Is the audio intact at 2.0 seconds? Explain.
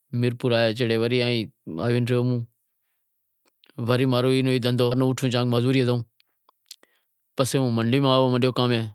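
Yes, the audio is intact at 2.0 seconds, with no audible fault at that point in the speech.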